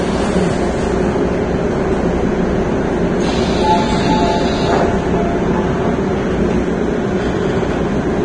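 Throughout, the sound carries heavy damage that is likely from Vorbis compression at a low rate near 24 kbps. Nothing is present above 9.7 kHz. The remaining treble is coarsely quantised into grainy hiss, tones sound roughened, and attacks are blurred.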